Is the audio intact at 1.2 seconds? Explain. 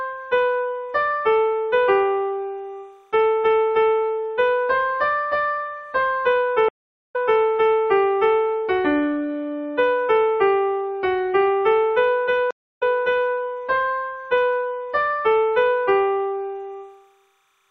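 No. At 1.2 seconds, as throughout the clip, a faint, steady chirping warble sits far behind the sound, about 45 dB down. This is timecode bleed: linear timecode at 29.97 frames per second leaks in from a neighbouring track or cable, its square wave flipping between pitches near 1 and 2 kHz.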